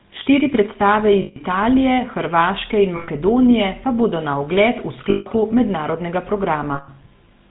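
Right from the start the whole clip carries the GSM full-rate codec sound: nothing above 4 kHz, and a buzzy, gravelly grain on the speech, which fits the 13 kbps full-rate coder. It models the vocal tract and feeds it sparse pulse excitation, and that roughness is plainly audible.

Then come four spots of lost GSM frames, at 1.22–1.37 s, 2.96–3.09 s, 5.1–5.27 s and 6.74–6.89 s, each 120 to 160 ms long. The decoder keeps repeating the last good frame, so each gap turns into a brief metallic, rough ring.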